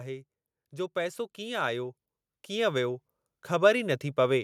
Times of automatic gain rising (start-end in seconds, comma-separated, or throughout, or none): 0.70-4.39